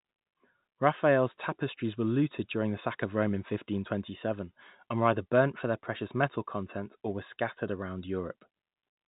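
No technical faults can be heard in the speech, which carries the narrow band of standard G.711 telephone coding, with nothing above about 3.8 kHz and only a faint quantisation hiss riding under the signal level.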